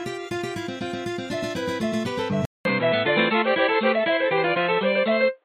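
Everyday sounds here, and at 2.45 s there's a 200 ms gap, then everything above 4.2 kHz vanishes and the level shifts by about 5 dB: likely an input switched to a poorer device.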